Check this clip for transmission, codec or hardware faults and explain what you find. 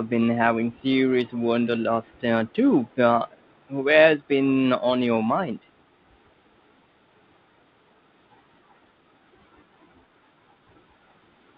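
There is one fault in this speech clip, an echo leak, heard three times: 2.04 to 2.21 s, 2.86 to 2.95 s and 3.32 to 3.46 s. Each is a very faint copy of the speech trailing the original by 156 ms, sitting roughly 35 to 40 dB below it, so it comes across as a brief ghostly smear. The likely cause is a far end playing the call on a loudspeaker, with its echo canceller letting some of that pickup through and sending it back. The speech is band-limited, with nothing above 4 kHz, which fits a narrowband telephone codec.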